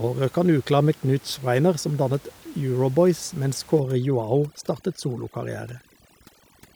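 From 3.80 s to the end of the clip, the speech shows overdone noise removal. The room noise, about 26 dB below the speech before that point, collapses to near silence dotted with twinkling specks, and the voice's quieter components are stripped along with the noise. A noise gate would mute the whole signal at once; here individual frequency bands drop out independently, which produces that chirpy, shimmering residue instead of clean silence.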